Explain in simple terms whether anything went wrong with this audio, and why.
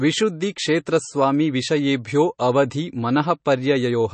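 Something did go wrong, and it lasts the whole clip. The speech has a watery, swirly edge, and the s sounds come out with a metallic chirp. Nothing comes through above about 8.3 kHz, so the top end sounds dull and closed off. That combination is the signature of heavy MP3 compression, which is the likely cause. The encoder ran short of data, chopped off the treble, and let quiet detail flicker in and out.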